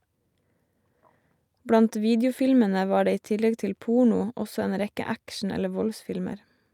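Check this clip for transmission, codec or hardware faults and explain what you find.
Nothing in the speech signal points to a technical fault: it arrives continuous and undisturbed throughout.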